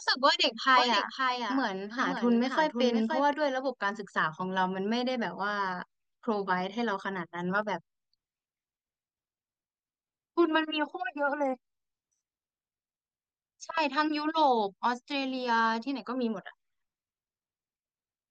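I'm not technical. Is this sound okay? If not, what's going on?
No. From 0.77 to 3.33 seconds the speech has a doubled audio track: a second, quieter copy follows about half a second behind and then stops abruptly. Likely cause: the same sound recorded twice through a slower second path.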